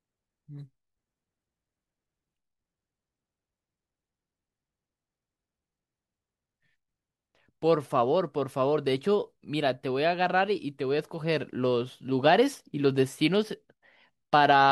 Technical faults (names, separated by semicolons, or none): none